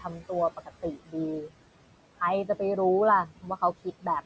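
Noise suppressor artifacts run throughout the 4-second clip. The suppressor pulls the room noise, which sits about 17 dB under the speech, down by about 18 dB frame by frame. The background dips in gaps and swells beneath speech.

Speech cut by the noise suppressor occurs at 0.0 to 0.3 s, 0.57 to 1.15 s, 1.43 to 1.54 s and 3.26 to 3.58 s. The suppressor mistook quieter speech for noise and lowered it by about 10, 18, 18 and 12 dB respectively. Brief stretches of a few tenths of a second sound swallowed or faint.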